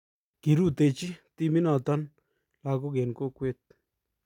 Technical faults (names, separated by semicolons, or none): none